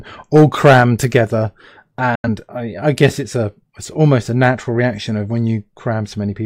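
At 2.15 s the speech drops out and returns at 2.28 s. This is a digital broadcast dropout. The receiver muted after bad or missing frames, with a quick 3 ms fade. About 85 ms of programme is simply gone, which fits two lost frames.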